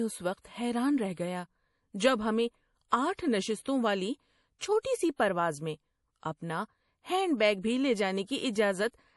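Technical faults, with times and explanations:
Throughout, MP3 compression: speech sounds watery, with nothing above 11.5 kHz, a flat spectrogram ceiling; likely a low-bitrate encode, fitting roughly 48 kbps.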